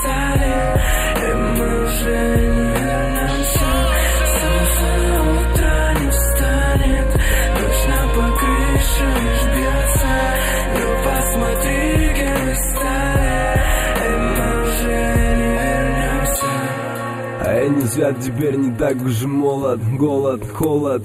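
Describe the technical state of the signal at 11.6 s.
At 11.6 s the signal carries channel delay (comb filtering), present for the whole clip. One channel trails the other by a few samples, about a tenth of a millisecond, and when the two are summed to mono the shared content cancels at evenly spaced frequencies, the first near 5 kHz. The sound is thin and hollow in the upper range. On a spectrogram this shows as a steady dark band around 5 kHz that stays fixed in frequency.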